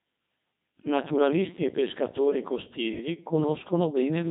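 From start to finish the speech passes through a Codec 2 vocoder, which fits a rate near 2.4 kbit/s. Only pitch, voicing and envelope survive and the voice is rebuilt from sine waves, so it sounds robotic and buzzy, with nothing above 3.8 kHz. Unlike ordinary low-bitrate telephone codecs, the original waveform texture is gone entirely.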